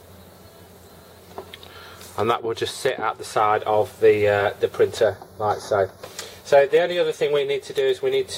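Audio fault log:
5.04–6.04 s, channel delay (comb filtering): one channel lags about 0.2 ms before mono summing, so evenly spaced notches from around 3 kHz sound hollow; spectrogram shows fixed dark horizontal bands.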